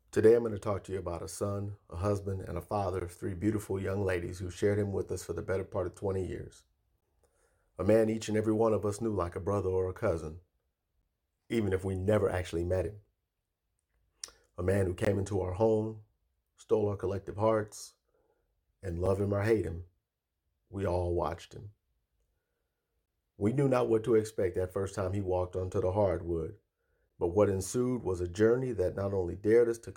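At 3.00, 7.01, 11.02, 15.05, 19.06, 23.06 and 27.09 s, gaps between stream segments cut hard-edged silences of about 6 to 19 ms into the speech, just before "of three beautiful young", before "him or hate him" and after "walked onto the hardwood". Mismatched timestamps at each 4-second segment boundary leave a hole the player fills with silence. Unlike a dropout, no speech is lost; it resumes intact, slightly late.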